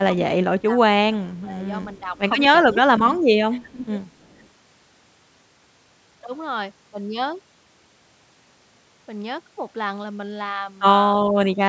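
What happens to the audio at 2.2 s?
From 2.14 to 2.21 s, a brief echo leak appears. A faint copy of the speech returns about 329 ms after the original. It is very quiet, far below the main speech, and lasts only a short scrap. The likely cause is a loudspeaker on one side of the call. Its microphone picked up the sound, and the echo canceller failed to remove all of it. That leftover was sent back down the line.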